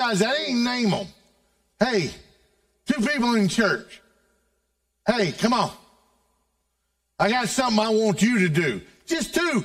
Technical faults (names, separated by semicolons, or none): channel delay (comb filtering)